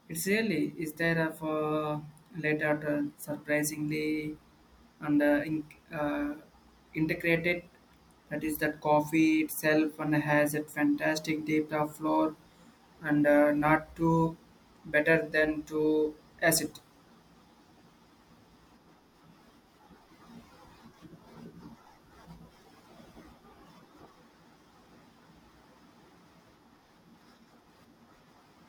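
Nothing goes wrong anywhere in this recording of speech, so there's no fault to point to at any moment.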